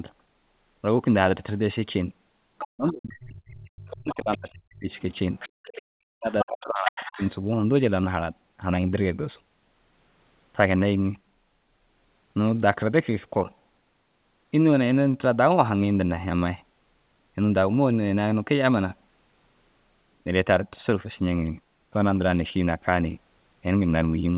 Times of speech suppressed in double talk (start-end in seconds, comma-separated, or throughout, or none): 2.73-4.90, 5.81-7.22